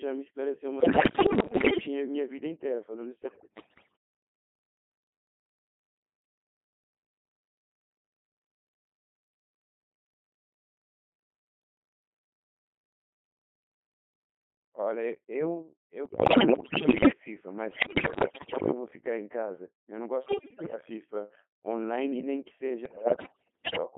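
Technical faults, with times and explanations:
Throughout: Codec 2 vocoder. Speech is rebuilt from sine waves, sounding robotic and buzzy within 150 Hz to 3.4 kHz, consistent with roughly 2.4 kbit/s.
0.8–1.9 s, 3.3–4.0 s, 16.1–17.1 s, 17.7–18.7 s, 20.3–20.8 s, 22.9–23.8 s: bit errors on digital voice radio. About 15 to 20 percent of bits flip, so pitch, level and tone jump into warbling gibberish.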